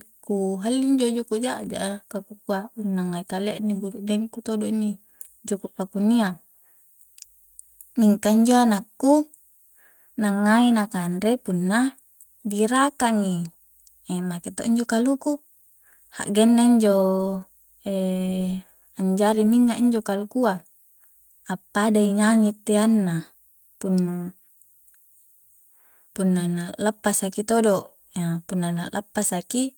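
No technical faults are audible.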